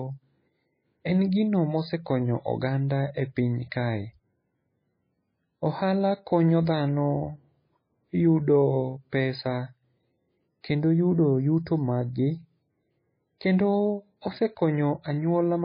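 Throughout the speech there is heavy codec damage: the sound is watery and swirly, with weak detail flickering on and off from moment to moment, and nothing at all above 5 kHz, so sibilants lose their top and attacks smear. The likely cause is MP3 compression at a very low bitrate, one that fits roughly 16 kbps, where the encoder zeroes weak frequency lines and cuts the treble at a fixed point.

From 10.75 to 12.38 s a channel delay (comb filtering) adds a hollow, phasey colour on top of that. One channel arrives about a fifth of a millisecond late, and summing to mono cancels shared content at evenly spaced frequencies, the first near 3 kHz. The difference from the codec damage is that these notches stay fixed rather than swirling, and the effect starts and stops at clear points instead of running through the whole clip.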